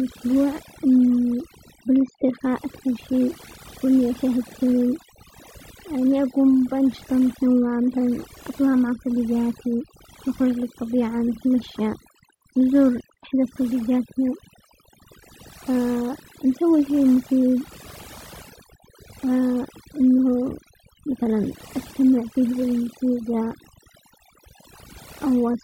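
Speech runs through the whole recording, and the gaps between phrases drop to an unnaturally dead hush sprinkled with twinkling specks. That is overdone noise removal: the noise reduction was set too aggressively, so every frequency band sitting close to its noise estimate gets pulled right down or switched off. The quiet detail of the voice is caught along with the noise, leaving isolated flickering fragments behind.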